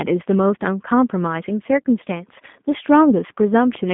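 From start to finish, the speech carries G.729 codec damage. The codec does not store the waveform. It models each short frame with a vocal tract filter, a pitch predictor and a handful of pulses. The sound is narrowband, confined to roughly 150 Hz to 3.6 kHz, with no air or sibilant sparkle above that. The roughness is plainly audible: a buzzy, slightly synthetic grain. This fits the G.729A variant at 8 kbit/s.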